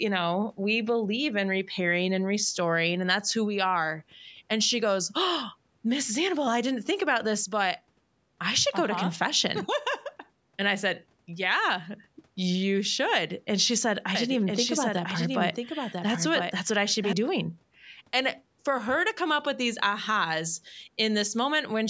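A doubled audio track runs from 14.15 to 17.13 s: the speech is heard twice, with a second full-band copy trailing about a second behind and sitting a few decibels lower, around 5 dB down. The copy has no decay or added room sound, and it appears and disappears abruptly at those times. The likely cause is the same audio being captured again through a slower path, or an edit that holds two out-of-step copies.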